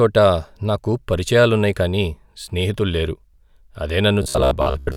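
From 4.23 s to 4.96 s the speech becomes a rigid metallic buzz at 66.8 Hz. This is robotic sound from repeated short buffers, likely a 15 ms slice looped over most of that stretch. A spectrogram shows flat, evenly spaced harmonic stripes, and the waveform shows identical repeating cycles.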